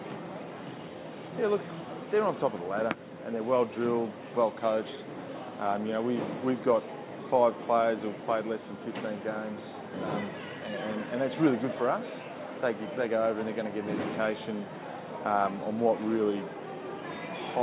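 Nothing in the audio points to a technical fault at any point in the recording.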